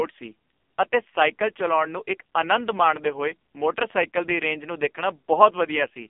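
From start to finish, the speech carries AMR narrowband mobile codec damage. Nothing above 3.5 kHz survives, and the low end is thin below about 250 Hz, giving the boxed-in sound of a phone line. The codec rebuilds speech from a vocal tract model fed by sparse pulses in 20 ms frames. The damage is heavy. The voice sounds buzzy and synthetic, which points to a low mode of roughly 5.9 kbps.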